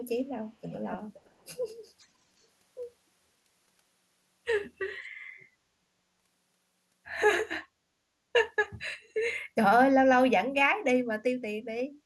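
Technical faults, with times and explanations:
0.62–0.97, 1.14–1.30, 1.99–2.07, 5.03–5.08, 5.40–5.44 and 9.03–9.09 s: echo leak, a scrappy copy of the speech trailing 524 ms behind, fairly quiet at first and then barely there. Likely a far-end speakerphone whose echo canceller let some of it slip back.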